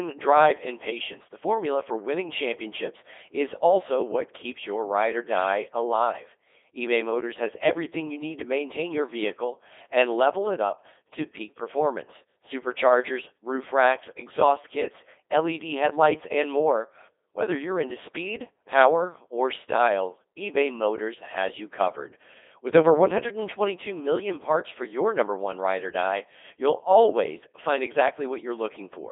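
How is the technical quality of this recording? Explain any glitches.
The recording is poor throughout. The speech sounds robotic and buzzy for the whole clip, with the Codec 2 vocoder's damage heavy and constant. The voice is thin and phone-like, confined to roughly 300 Hz to 3.6 kHz, with nothing above 3.8 kHz.

The cause is the vocoder itself. Rather than keeping the waveform, it transmits only pitch, voicing, energy and a coarse spectral envelope, and the decoder rebuilds the voice from sine waves. The artificial, buzzy quality fits its 2.4 kbit/s mode.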